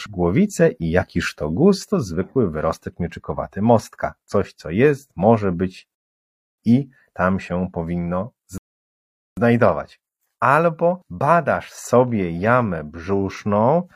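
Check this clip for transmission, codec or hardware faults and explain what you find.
The speech contains two rebuffering stalls. After "co jest może być" it drops to silence from 5.95 to 6.58 s, then after "i tam się powinno" from 8.58 to 9.37 s. The player exhausted its downloaded audio and paused until more arrived, adding 0.63 s and 0.79 s. Playback resumes exactly where it stopped, with nothing skipped.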